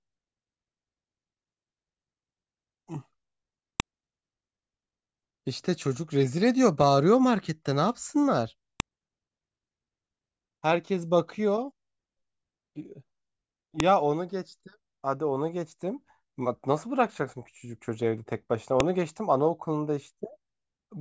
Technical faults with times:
3.80 file header played as audio
8.80 file header played as audio
13.80 file header played as audio
18.80 file header played as audio

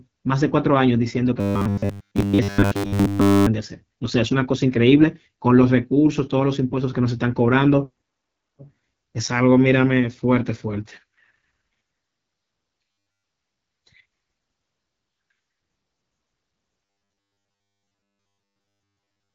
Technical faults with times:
0.00-19.35 AMR wideband (HD Voice) codec
1.40-3.46 robotic sound from repeated short buffers
12.92-13.24 robotic sound from repeated short buffers
16.85-19.34 robotic sound from repeated short buffers

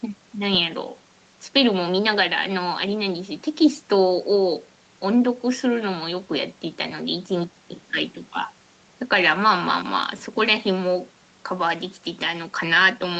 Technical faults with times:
none

